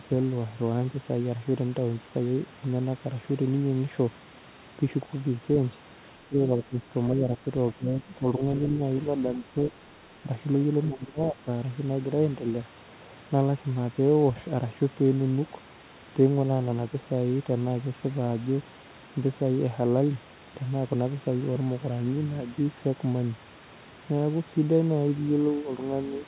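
Between 6.28 and 11.47 s, at 6.28, 7.13, 7.74, 9.37 and 10.88 s, the speech drops by about 5 to 20 dB in patches. This is likely speech suppressed in double talk, where the echo canceller mistook the talker for echo. The dips sit over band-limited call audio that stops near 4 kHz.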